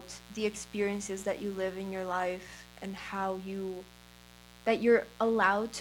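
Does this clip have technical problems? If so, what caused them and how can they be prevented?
Yes, a mains buzz sits under the speech for the whole clip, at roughly 25 dB below it. Its fundamental is 60 Hz. A dimmer, rectifier or unshielded cable injects sharp switching spikes twice per mains cycle, so the buzz pulses at 120 Hz and carries harmonics up into the kilohertz range. That gives it a raspy, edgy character, unlike plain hum, which is a smooth, low tone with few upper harmonics. Keep microphone cables shielded and away from dimmers and power supplies, and power the recording chain from a clean, properly grounded circuit.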